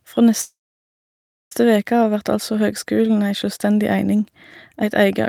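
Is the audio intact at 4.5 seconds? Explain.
Yes, the speech at 4.5 s is intact, with no dropout, click, distortion or other fault there.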